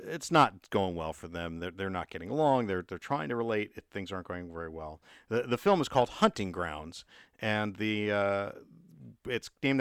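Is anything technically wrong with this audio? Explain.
No, no technical faults heard.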